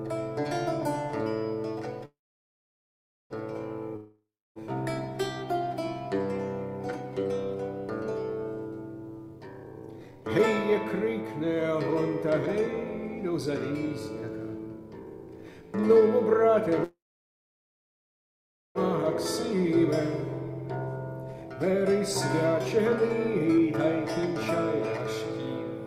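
At 2.05 s a call audio freeze begins. The last sound is carried on as a brief fading buzz, then about 1.16 s of near-silence, until 3.33 s. Nothing is lost when the audio resumes. The 1.25 s gap is simply inserted, which likely reflects packets held up in transit while the jitter buffer ran dry. Everything after it plays that much later.

A long network dropout follows from 3.96 s to 4.61 s. The sound again trails off into a hiss, then around 0.3 s of silence. When audio returns, roughly 0.6 s of material is simply gone. The pattern likely points to packets that never arrived.

Jitter buffer speed-up appears at 9.28 to 10.24 s, where the audio runs at 148% of normal speed with unchanged pitch. Roughly half a second is trimmed out in small pitch-period slices, so this passage sounds noticeably rushed. A milder stretch from 11.06 to 16.68 s runs at 112%, removing roughly 0.7 s. Here the hurry is subtler but sustained.

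A second call audio freeze runs from 16.84 s to 18.78 s. A short fading tail gives way to about 1.78 s of silence, and the audio then continues intact. This adds 1.91 s of delay, likely from another stall in packet delivery.

A final jitter buffer speed-up from 21.35 to 23.86 s runs at 113%. It trims roughly 0.3 s to work off accumulated delay, giving a slightly hurried feel at the original pitch.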